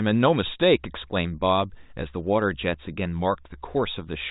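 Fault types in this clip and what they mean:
Nothing stood out on listening to this speech clip, which comes across at the narrow bandwidth of a telephone line.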